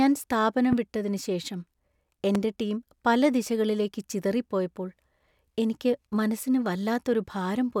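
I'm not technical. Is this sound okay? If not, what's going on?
No. There are two loud pops in this speech, at 0.73 s and 2.35 s, each lasting about 25 ms and jumping well above the level of the voice. A loud pop like this is most likely a brief electrical jolt, from a plug, a switch or static, added on top of the recording. Unlike a dropout, nothing goes missing: the speech carries on underneath each single sharp thump.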